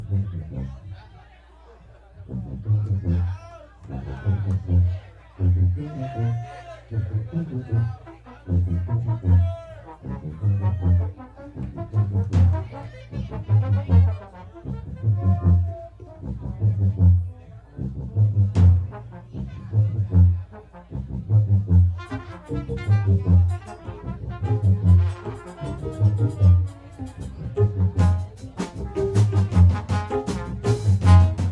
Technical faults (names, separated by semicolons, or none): none